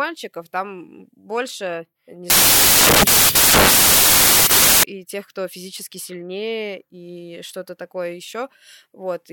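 From 2.3 to 4.83 s, samples built from the wrong bytes turn the speech into loud, harsh broadband noise, with the low bits misread as high, before "тех кто физически сильнее".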